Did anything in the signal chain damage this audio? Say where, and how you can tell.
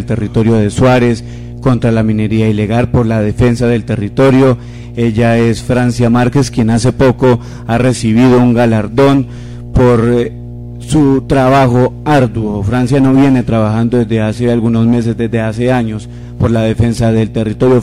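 Yes, there's mains hum on it, and it's an analogue wiring problem. From the very start to the end there's a steady low tone sitting at 60 Hz with a few low harmonics stacked on it, and it's fairly prominent, only around 15 dB under the signal. That's the power line leaking in, most likely through a ground loop or a transformer sitting too close to the cabling, before the sound ever reached the converter.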